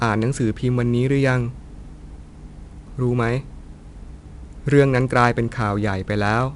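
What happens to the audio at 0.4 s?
At 0.4 s the speech carries 4-bit ADPCM compression, present throughout: coarse adaptive steps add gritty, level-following hiss, and a spectrogram shows a broadband noise floor, empty above 10.6 kHz.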